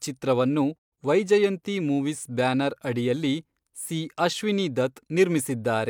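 Speech clip with a digital broadcast dropout from 0.77 to 0.94 s. The receiver lost frames and muted, fading out within 20 ms. About 128 ms of speech is missing, which fits three lost frames, before "ವೈಜಯಂತಿ ಮೂವೀಸ್ ಬ್ಯಾನರ್ ಅಡಿಯಲ್ಲಿ".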